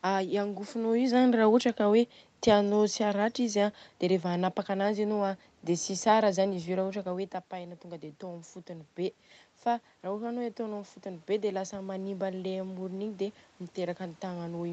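It's a speech recording with automatic gain rising from 10.64 s to the end at 14.72 s. The input level drops by about 11 dB, so the gain control slowly climbs to compensate, and voice and room noise swell up together.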